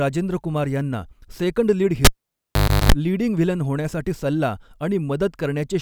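At 2.05 s, just after "कुमार यांना सेकंड लीड", the cable is pulled and plugged in. A pop cuts the speech. Near silence follows for about 0.82 s. A 50 Hz mains buzz lasts 0.34 s as the plug tip touches. Another pop returns the sound at 2.92 s, before "लीडिंग व्हिलन होण्यासाठी सल्ला".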